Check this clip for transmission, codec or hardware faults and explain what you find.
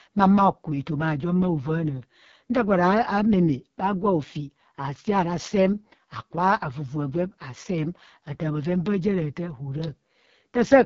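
One codec fault runs through the whole speech clip: AMR wideband (HD Voice) coding. Nothing sounds above 7.4 kHz. Below that, a pulse-excited vocal tract model carries the speech and noise fills the top band. The heavy rough, raspy texture fits the lowest 6.6 kbit/s mode.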